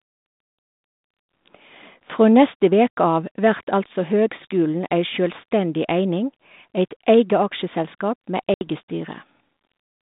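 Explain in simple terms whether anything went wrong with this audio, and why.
Yes, there is packet loss on an ADPCM call at about 8.54 to 8.67 s: a 70 ms hard silent gap. Unlike a simple dropout, the phone's decoder loses track, so the sound briefly returns off-balance before settling.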